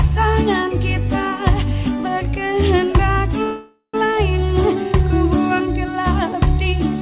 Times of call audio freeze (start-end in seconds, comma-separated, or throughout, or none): 3.44-3.96